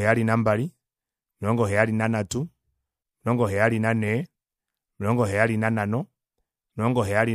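At 1.27 to 1.30 s, just before "omilongo heyali nanhatu", then 4.22 to 4.27 s and 6.68 to 6.70 s, damaged data in the compressed stream makes the decoder misread frames and lose sync, giving brief glitches, seen as short broadband vertical smears in the spectrogram and abrupt waveform discontinuities.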